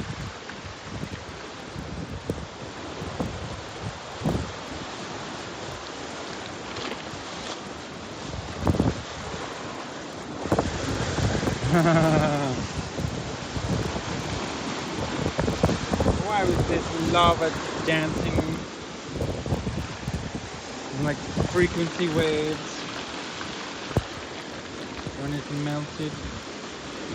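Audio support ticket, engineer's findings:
Steady 100 Hz buzz riding on the sound for the whole clip. Present only while signal plays. Drops out in silence. Probable component: sample-rate converter, resampler restarted on every block. Block length 10 ms, so one edge error every 10 ms, giving the 100 Hz rate. Converter has no history across block boundaries. It pads each edge with silence or wrapped samples. Small error at every seam. The upsampling ratio points to a 16 kHz to 48 kHz conversion.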